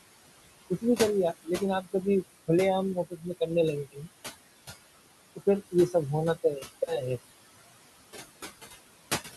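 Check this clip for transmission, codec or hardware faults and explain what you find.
Two faults stand out, both from a noise suppressor working on the speech.

Noise suppressor artifacts run throughout: the background drops away between phrases and swells back under them. The suppressor pulls down bands it judges to be steady noise, by about 18 dB, frame by frame. The room noise itself sits about 14 dB below the speech.

Speech cut by the noise suppressor occurs from 2.95 to 3.41 s and again from 3.92 to 4.08 s, where parts of the speech sound swallowed and faint. The suppressor mistook those quiet stretches for noise and turned them down with the background, by about 14 dB and about 18 dB respectively.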